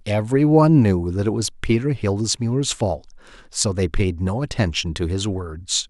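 No technical faults can be heard anywhere in the recording.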